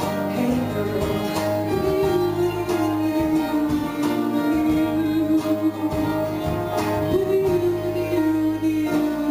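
Throughout, the audio was upsampled from 16 kHz to 44.1 kHz by holding each sample with no smoothing filter, giving imaging from sample-and-hold upsampling: mirrored copies fill 8 to 16 kHz at about 25 dB down, a bright metallic fizz that follows the sound's level.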